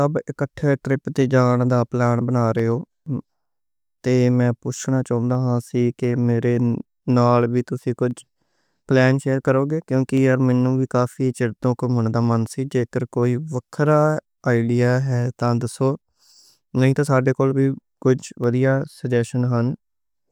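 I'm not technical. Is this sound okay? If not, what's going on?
No. Clock drift buffer slips run from 0.53 s to 19.81 s: a click about every 0.69 s, around thirty in all, through the speech. The likely cause is two pieces of equipment keeping time on slightly different clocks, off by a few hundredths of a percent. The gap between them slowly builds up or runs short, so every so often a tiny sliver of sound, just a handful of samples, is skipped or repeated, and each slip makes a click.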